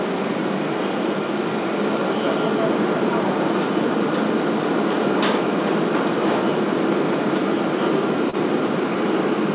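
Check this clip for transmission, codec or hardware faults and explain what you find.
One transmission fault stands out, heard over a call path band-limited at 4 kHz, which fits G.711 A-law. From 8.30 to 8.36 s, short concealed packet loss: a packet arrived too late, and the receiver extended the preceding sound to cover the gap before blending back. It comes through as a brief smear or wobble.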